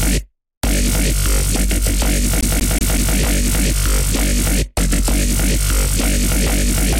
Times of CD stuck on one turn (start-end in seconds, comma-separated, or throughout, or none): 2.41-3.16